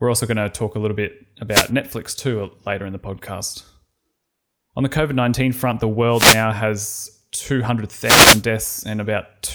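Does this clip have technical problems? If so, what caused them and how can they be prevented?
Yes. Three wireless microphone noise hits occur: 1.49–1.71 s, 6.10–6.47 s just after "front the", and 8.01–8.44 s. Each is a brief static burst. Reflections cancelled the FM radio signal, so receiver noise rose. Diversity receivers and clear line of sight prevent this.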